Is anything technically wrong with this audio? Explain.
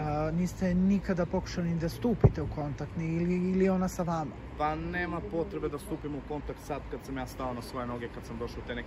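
No, nothing technically wrong can be heard in this audio. No faults turn up anywhere in the recording.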